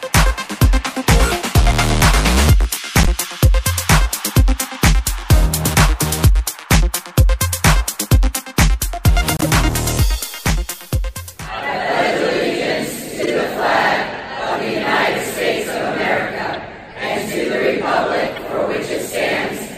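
Corrupt frames were decoded at 3.03, 9.37, 11.55, 13.22, 16.53 and 18.36 s. Damaged codec data produced short chirps and noise bursts, loudest near full scale at 3.03 s. Unlike a dropout, misplaced energy replaces the sound briefly.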